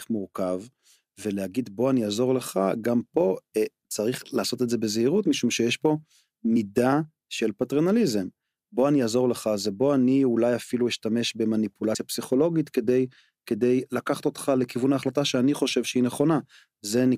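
At 6.55 s and again at 11.94 s, the speech is broken by a very brief blip. Each is damaged data in a compressed stream. Corrupted bytes make the decoder misread a frame and lose sync. It then hunts for the next valid frame.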